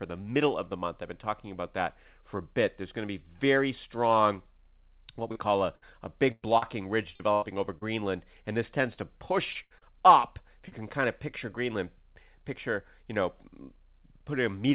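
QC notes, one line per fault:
5.32–7.83 s, repeated packet loss (robotic sound): seven gaps, the longest 102 ms, about 0.4 s missing in all. Each hole gets patched by stretching the last bit of sound, so roughly a sixth of this stretch turns choppy.
8.93–9.99 s, repeated packet loss (robotic sound): same thing again, five gaps with the longest 77 ms and about 0.18 s lost. Back-to-back concealment leaves the audio choppy, with pieces dropping out across nearly a fifth of the span.
10.68–10.81 s, short concealed packet loss: one 40 ms hole, filled by continuing the preceding sound and blending back in, which nudges the timing slightly. You hear a brief smear or wobble, and a short consonant there could vanish. Everything sits under 4 kHz, which fits the narrowband G.711 call codec.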